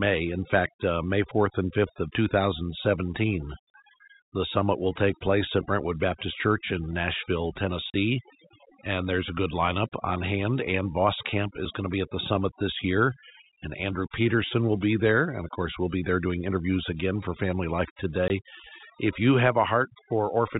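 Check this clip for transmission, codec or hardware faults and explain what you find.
Three faults are present: overdone noise removal, packet loss filled with silence, and a dropped buffer. The speech also carries the telephone band limit of G.711 coding, with nothing above 4 kHz.

Overdone noise removal runs through the whole clip. Bands near the noise estimate are cut hard, leaving near-silent twinkling in the background. A spectrogram shows a blotchy, speckled background.

Packet loss filled with silence occurs at 3.70–3.74 s, 7.90–7.94 s (40 ms each, which fits two 20 ms packets) and 18.28–18.30 s (20 ms). Missing packets were replaced by silence. Each gap appears as a flat, hard-edged waveform hole.

A dropped buffer (overrun) occurs at 11.65 s, just before "going to be at". Around 15 ms of audio is gone with no gap, likely because samples were overwritten before being read. The sound jumps ahead, and the waveform shows a discontinuity.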